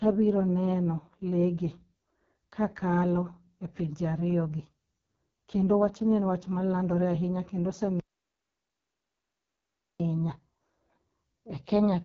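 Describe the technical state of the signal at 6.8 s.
AMR wideband (HD Voice) codec damage is present at 6.8 s and runs through the whole clip. The speech is rebuilt from a pulse-excited vocal tract model, with nothing above 6.6 kHz, and the heavy rough, raspy texture fits the lowest AMR-WB mode, around 6.6 kbit/s.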